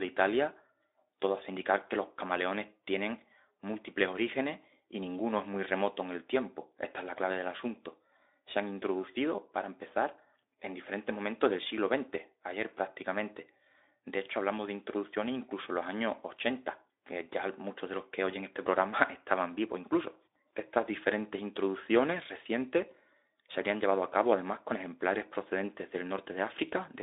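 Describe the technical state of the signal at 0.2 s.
At 0.2 s the signal is intact, with no fault present at that moment.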